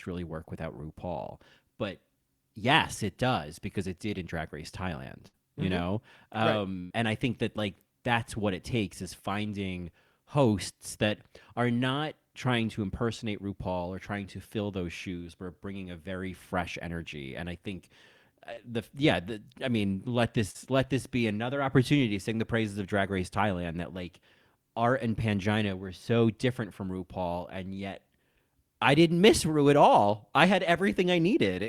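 At 5.27 to 5.35 s and 6.79 to 6.93 s, bursts of packet loss drop 60 ms and 100 ms; the receiver holds the last sound and fades it, then skips ahead. At 18.53 and 20.51 s, shorter concealed packet loss replaces about 40 ms each with a quick smear rather than an audible held tail.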